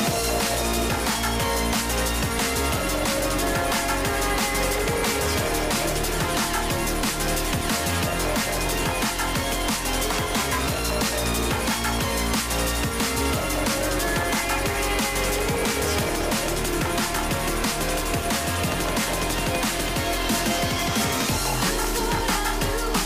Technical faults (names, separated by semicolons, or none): filter restarted on every block